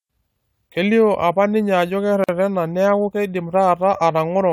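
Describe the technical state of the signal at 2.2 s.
A gap at a join of encoded pieces opens from 2.24 to 2.29 s, right after "apa ninye ajo". Two separately encoded segments were butted together with the encoder's start delay and end padding left in, leaving a 46 ms gap, its edges smeared so the silence itself is shorter, before "niaku keidim" resumes.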